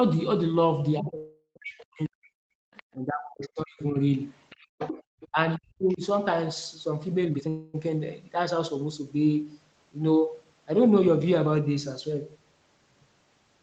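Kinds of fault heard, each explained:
Speech suppressed in double talk: the speech drops by up to about 40 dB in three stretches before 6.0 s, likely the echo canceller ducking both sides. It dips and thins rather than stalling.
Call audio freeze: the sound stalls into a fading buzz for 0.38 s at 1.17 s and for 0.25 s at 7.49 s, likely from late packets. It then resumes without loss, unlike suppression.
Other side's voice leaking through: a second voice comes through in brief scraps at 2.74 s and 5.89 s and for a longer stretch from 4.50 to 5.28 s, likely leftover loudspeaker echo. This adds sound rather than removing it.
Jitter buffer speed-up: from 7.25 to 7.49 s the speech races at nearly double speed with unchanged pitch, as about 0.2 s is squeezed out. A resampling speed change would raise pitch instead.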